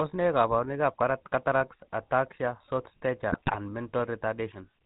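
From start to finish the speech has a buzzy, gravelly roughness and a dull top with nothing above 4 kHz, the plainly audible mark of the GSM full-rate codec. Vocal-tract modelling driven by sparse regular pulses, at a rate that fits 13 kbps, strips the finer texture away.

From 3.32 to 3.57 s, just after "ataxia short", the voice breaks into squawks, pops and gargling. These are GSM bit errors: corrupted filter, pitch and gain values distort frame after frame, which fits an error rate near 2%.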